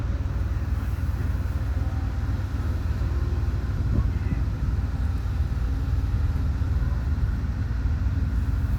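No technical faults can be heard in this recording.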